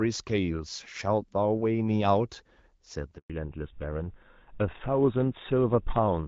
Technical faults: handover gap; fallback to narrowband

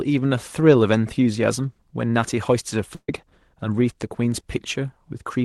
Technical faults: burst of packet loss

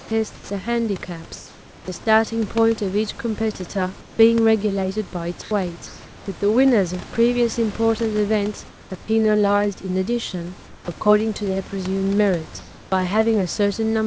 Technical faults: sound dropped by the voice detector; comfort noise in place of the background

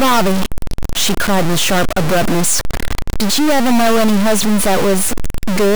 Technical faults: stuck bit

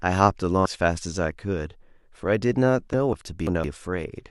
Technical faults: damaged data in a compressed stream; chunks out of order

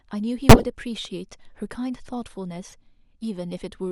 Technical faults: corrupt frame decoded

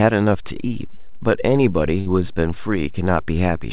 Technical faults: DC step; burst of packet loss

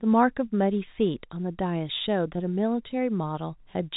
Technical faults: none

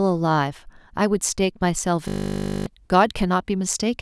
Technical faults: system hang loop

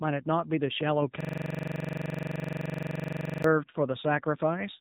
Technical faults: AMR narrowband mobile codec; system hang loop

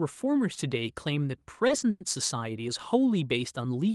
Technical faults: short stall from a late packet; call audio freeze

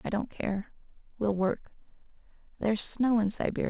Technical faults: none

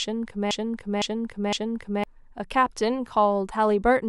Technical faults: broken-record loop

